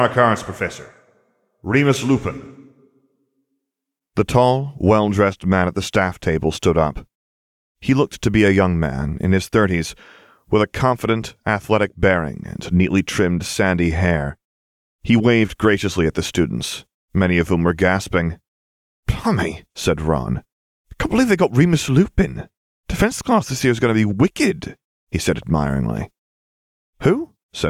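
No technical faults are audible.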